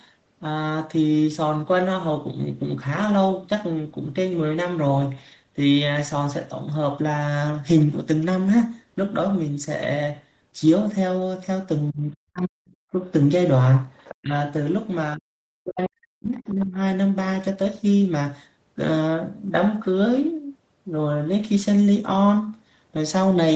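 In this speech recording, the talker's voice drops sharply, by as much as about 40 dB, at 11.9 to 12.71 s, 14.21 to 14.34 s, 15.16 to 15.31 s and 15.63 to 16.78 s, ducking or cutting out in pieces. This is likely speech suppressed in double talk: an echo canceller, unable to separate the talker from loudspeaker echo while both sides spoke, turned everything down. From 13.96 to 14.15 s a faint second voice, around 20 dB below the talker, slips through, likely the other side's voice leaking through because echo cancellation left some loudspeaker sound in the microphone signal. The audio tops out near 8 kHz, consistent with a call path using the Opus codec at a low bitrate.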